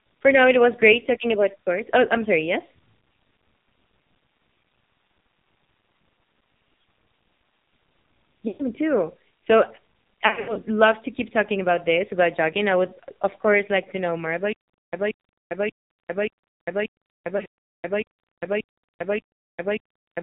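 The speech sounds buzzy and synthetic throughout, boxed into a narrow band with nothing above 4 kHz. Any background turns into a swirling warble. This is the AMR narrowband mobile codec at heavy damage. The mobile codec rebuilds the voice from a vocal-tract model driven by a few pulses per 5 ms subframe, and the coarseness here fits a low mode of about 5.9 kbps.

At 8.48 to 8.63 s the voice smears, stretches and sags toward silence. This is lost AMR speech frames, which fits about six missing 20 ms frames. The decoder repeated its last good pitch and vocal-tract settings with falling gain. From 10.28 to 10.60 s, just before "love to keep talking", the losses are scattered over about 280 ms, giving repeated warbles and dips before the speech returns rough. From 17.38 to 17.46 s, just after "like to know more", shorter gaps of up to 60 ms produce similar brief drawn-out fades.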